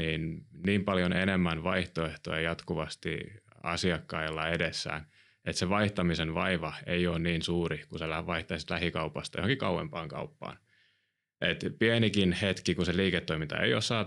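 A speech recording with no technical faults to report. Nothing in it calls for a time or a cause.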